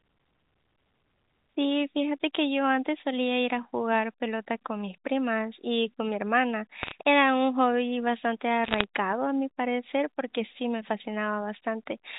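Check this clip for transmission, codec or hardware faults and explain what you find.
Two short bursts of bit errors on a digital phone line come through, from 6.81 to 6.92 s and from 8.64 to 8.84 s. The speech itself sits inside the 4 kHz ceiling of G.711 telephone coding. In each burst, a fraction of a percent of the transmitted bits arrive flipped, so isolated samples jump to wrong values. Where a sign or high-order bit is hit, the sample leaps far from its neighbours, producing sharp ticks that cluster into a brief crackle over the speech. On a waveform these appear as single-sample spikes standing out from the surrounding signal. On a spectrogram they show as thin vertical lines reaching up to the band edge.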